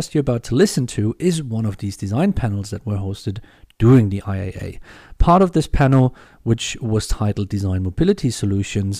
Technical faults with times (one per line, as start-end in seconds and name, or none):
0.60-0.64 hard clipping
3.86-3.99 hard clipping
5.21-5.44 hard clipping
5.81-6.04 hard clipping
8.09 hard clipping